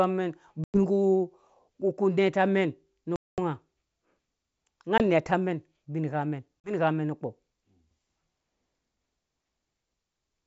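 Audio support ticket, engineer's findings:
Hard-edged silent gaps, then speech re-entering slightly distorted: 0.64–0.77 s (about 100 ms lost), 3.16–3.39 s after "mɛn nu" (220 ms), 4.98–5.01 s (20 ms), 6.61–6.73 s before "mɛn nukpɔ" (40 ms). Packet loss on an ADPCM call: lost packets, from one to about ten per gap, were filled with silence, and the decoder's predictor and step size drifted from the sender's, settling within tens of milliseconds. The G.722 wideband path at 64 kbit/s sounds clear up to 7 kHz, with a light hiss in the upper band.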